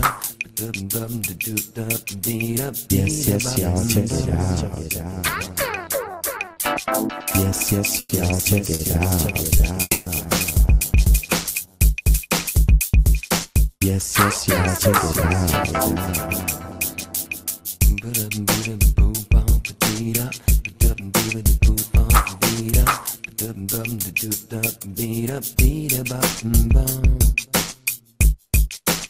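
A metallic buzz runs through the whole clip: overlap-add ripple, the level swinging by about 6 dB at around 100 Hz because the reassembled frames don't sum to a constant gain.

At 6.53 to 6.58 s a short stall from a late packet holds the sound for 30 ms. The jitter buffer emptied and playback resumed 30 ms later.

From 7.99 to 10.32 s the audio drags and stutters. These repeated stalls are four gaps filling 210 ms in total, the longest 120 ms, as packets kept arriving too slowly.

Within that span, at 9.81 to 10.08 s, the sound freezes and fades, dropping to silence for about 10 ms, adding a 250 ms gap. This call audio freeze was likely caused by packets held up in transit.

From 21.34 to 26.52 s everything runs hurried at 105% speed with unchanged pitch. This is jitter buffer speed-up, trimming roughly 0.3 s of pitch periods to cut the built-up delay.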